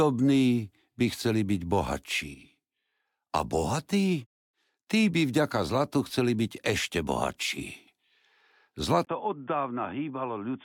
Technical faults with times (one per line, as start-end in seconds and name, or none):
9.05-10.64 input switched to a poorer device